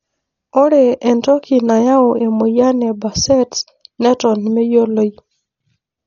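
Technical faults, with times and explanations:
Throughout, Dolby Digital compression: the speech is dull with nothing above 7 kHz, and a rough, fluttering noise clings to voiced sounds. This points to heavy AC-3 coding at a starved rate, likely around 40 kbps, where unfunded frequency lines are refilled with dither noise.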